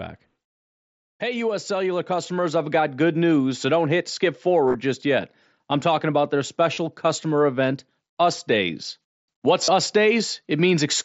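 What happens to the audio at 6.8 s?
Concealed Bluetooth headset packet loss runs from 6.74 to 6.77 s, between "I'm talking about their" and "customer event". For about 30 ms, which fits a short run of lost packets, the receiver repeats a best-matching recent stretch of waveform, giving a brief buzzy tone and a slight warble as real audio resumes.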